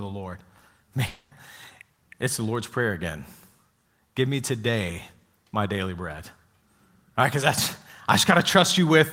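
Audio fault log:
1.07–1.33 s, long network dropout, likely: about a quarter second of speech never arrives, and the receiver fills the gap by stretching the last sound into a fading buzz rather than silence, so the speech resumes with that stretch missing.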